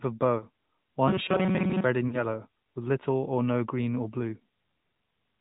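Throughout, the speech carries AMR narrowband mobile codec damage: nothing above 4 kHz, with a clearly buzzy, synthetic texture that fits a mid-rate mode around 10 kbps. Lost AMR speech frames cause a brief warbling dip from 0.38 to 0.45 s, consistent with one concealed 20 ms frame, and a longer smeared, fading gap from 2.08 to 2.24 s, consistent with about 40 ms of missing frames.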